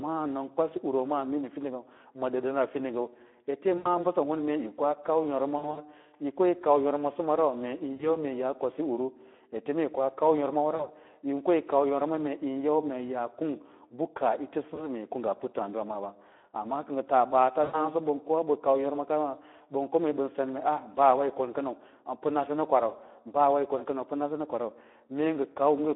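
A speech recording carried over a Speex codec link at about 11 kbps, with the band confined to roughly 250 Hz to 3.4 kHz. The low bit budget for the excitation leaves the voice hoarse and grainy throughout. On a spectrogram nothing appears above 3.4 kHz, and the harmonics look smeared and noisy rather than cleanly striated. Six short dropouts are covered by VoIP packet loss concealed by the speech codec, at 3.77–3.94 s, 5.57–5.81 s, 7.93–8.08 s, 10.75–10.89 s, 14.75–14.87 s and 17.63–17.88 s. Between about 20 and 120 ms of audio is missing each time, which fits runs of 20 ms frames. At 5.57 s the losses are scattered across about 200 ms. At each gap the decoder keeps repeating its last pitch and filter with falling gain, so the sound turns into a buzzy tone or coloured noise that fades. The voice stays weak briefly afterwards. In the waveform these show as a decaying, overly regular stretch, and on a spectrogram as flat, frozen harmonic bands.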